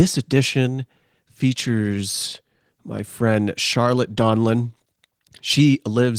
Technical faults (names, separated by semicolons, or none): Opus voice compression